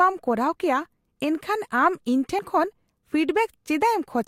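Speech, with compressed frames skipped at 2.38 s: a few whole frames go unplayed, so about 50 ms of audio vanishes and the speech jumps ahead.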